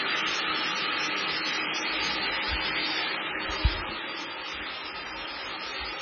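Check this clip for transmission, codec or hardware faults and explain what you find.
One codec fault runs through the whole clip: heavy MP3 compression, likely at a very low bitrate, around 15 kbps. Starved of bits, the encoder throws away the treble at a fixed point, leaving nothing above 6.5 kHz, and discards the weaker frequency lines, which then flicker on and off from frame to frame. The sound comes out dull and watery, with a swirling, metallic quality on bright or hissy parts and blurred, smeared attacks wherever something starts sharply.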